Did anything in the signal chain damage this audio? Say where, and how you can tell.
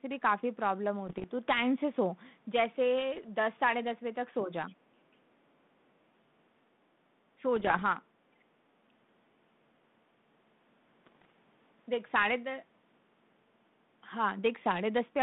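Yes. Bit errors on an ADPCM link, at the transmission stage, appear at 1.07–1.25 s, 3.14–3.25 s, 7.56–7.83 s and 11.06–11.30 s as pops and rough bursts with brief level jumps. Each flipped bit corrupts the decoder's step size and predictor, so the damage rings on for milliseconds. The error rate is up to about one percent.

Speech suppressed in double talk, in call processing, shows as short dips of about 5 dB at 4.44–4.51 s and 7.36–7.43 s, each under a tenth of a second. The likely cause is an echo canceller that could not separate this talker from far-end echo during overlapping speech and attenuated the send path.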